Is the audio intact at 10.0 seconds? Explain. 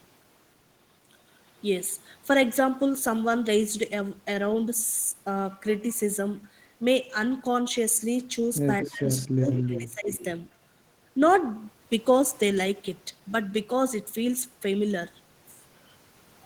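No. From 9.31 to 10.1 s, speech is suppressed in double talk. The echo canceller likely mistook overlapping talk for echo, so the speech drops by about 30 dB.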